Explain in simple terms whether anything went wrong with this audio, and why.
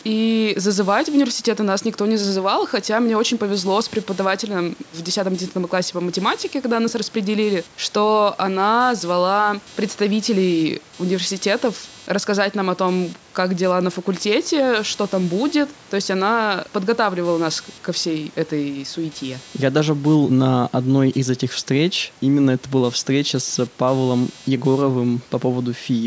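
Yes, something went wrong: computer activity noise runs through the whole recording, a faint buzzing that pulses a few hundred times a second. Its ups and downs follow the computer's workload rather than the speech, which sets it apart from a steady mains hum.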